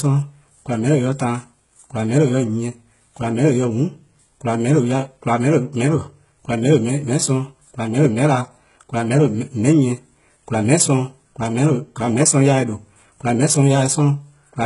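Throughout, the speech carries heavy HE-AAC compression damage. The treble sounds rebuilt rather than captured, and s sounds are gritty and metallic. Nothing sits above 11.1 kHz, which points to a very low bitrate near 12 kbps. A plain low-pass would leave the top dull, but here the treble is present yet artificial, which marks the likely cause as band replication.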